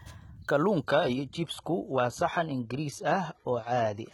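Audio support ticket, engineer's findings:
Adaptive stream at a lower bitrate, 0.85 s to end. Abrupt quality drop, no gap, not a dropout or rebuffer. Nothing above 11.8 kHz, synthetic treble, artefacts up. Player ABR switched to a low-bitrate rendition, which fits 16 kbit/s HE-AAC.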